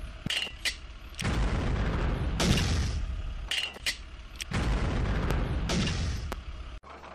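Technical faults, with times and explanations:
2.51–2.53 s, 5.31–5.33 s and 6.32–6.35 s, loud pop: three single sharp pops, each about 25 ms long, jump roughly 20 dB above the sound (the last about 15 dB), which carries on underneath. The likely cause is a brief voltage spike from a switch, static or driver glitch.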